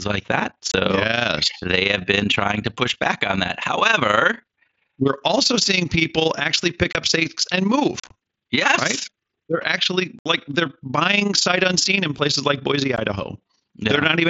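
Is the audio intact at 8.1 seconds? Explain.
No. Right after "pick up stakes and", from 8.00 to 8.11 s, there's unconcealed Bluetooth headset packet loss: about 75 ms of sound drops out across roughly 105 ms, in chopped holes up to 37.5 ms long. On top of that, the overlap-add ripple runs through the whole clip. Frames were rejoined with uneven gain, so the level flutters by about 11 dB at around 30 Hz, giving a rough tremolo.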